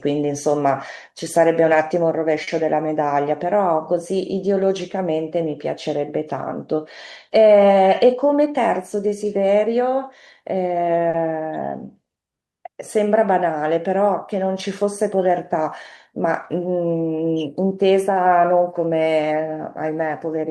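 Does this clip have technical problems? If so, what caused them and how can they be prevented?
Yes. At 2.43–2.49 s and 11.10–11.16 s, a short stall from a late packet holds the sound about 40 ms too long, with nothing lost. The jitter buffer ran empty, so the receiver stretched audio until the packet arrived. A deeper jitter buffer or steadier network delivery would prevent these stalls.

At 8.06–8.61 s (107% speed, roughly 40 ms cut) and 17.40–17.85 s (111%, about 50 ms cut), the speech sounds hurried at unchanged pitch. This is jitter buffer speed-up: the buffer held more audio than it aims for, so the receiver trimmed short pitch-period pieces to reduce the backlog. Reducing the bursts of network jitter that let the buffer overfill would prevent these speed-ups.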